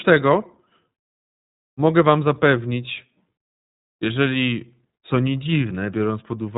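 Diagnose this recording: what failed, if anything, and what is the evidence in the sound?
Codec stage: iLBC coding runs throughout. The speech sounds rough and synthetic, with nothing above 3.8 kHz. This fits independently coded 20 ms frames at 15.2 kbps.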